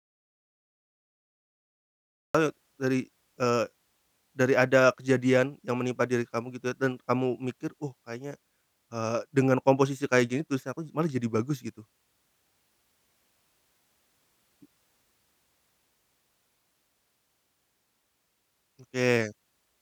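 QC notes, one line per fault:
0.00–2.35 s, audio dropout to silence: the input feed was likely lost, through a dead link or a stray mute, while the recorder kept writing zeros. The speech opens in total silence with no room tone, then cuts in mid-flow at "dari eee".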